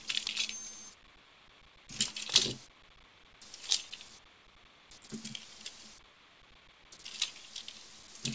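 No technical faults are audible.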